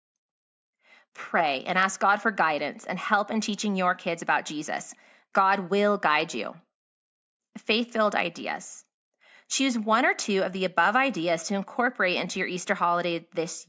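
No faults in the speech; the call microphone processing behaves as expected, with its high-pass filter trimming the lowest bass and nothing present above 8 kHz.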